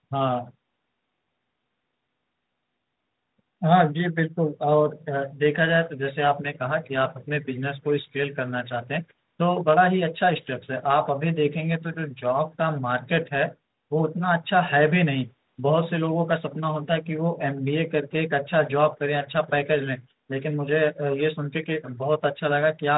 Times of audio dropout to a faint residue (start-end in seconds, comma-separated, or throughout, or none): none